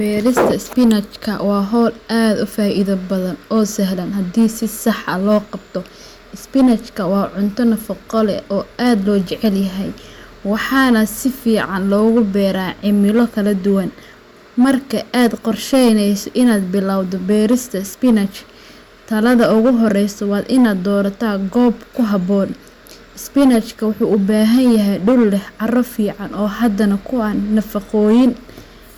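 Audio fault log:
throughout: hard clipping, speech driven about 7 dB past full scale so roughly 3% of samples are cut flat, adding high harmonics heard as harsh crackle on loud peaks.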